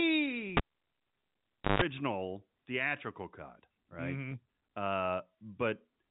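At 0.57 s a cable pulled and plugged in breaks the signal: a pop, about 1.2 s of near silence, a 0.15 s burst of 50 Hz mains buzz as the plug's tip makes contact, then a second pop at 1.82 s. The waveform shows two spikes bracketing a flat gap. On the spectrogram, broadband vertical lines appear, capped by the 3.8 kHz limit of the telephone coding, with a thin 50 Hz stripe just before the sound returns.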